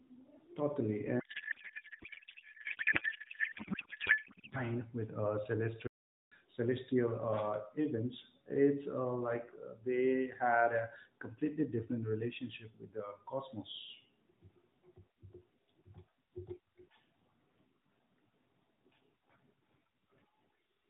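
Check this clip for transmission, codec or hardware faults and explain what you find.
Two faults are audible in this speech clip, which is carried over a narrowband mobile codec with the top end cut at 4 kHz, consistent with AMR-NB at about 12.2 kbps.

From 1.20 s to 4.58 s there is a codec payload misread. The speech is replaced by garbled, warbling noise that barely tracks the talker's rhythm. This fits octet-aligned AMR frames being decoded as bandwidth-efficient. The decoder still finds valid-looking frames, but every parameter field is read from shifted bit positions, so it synthesises nonsense until the packing matches again.

From 5.87 s to 6.32 s there is a playback stall. The output drops to silence for about 0.44 s in mid-flow, and then the sound resumes. The likely cause is the player's buffer running dry or its output thread being blocked, which leaves nothing to render until data or scheduling recovers.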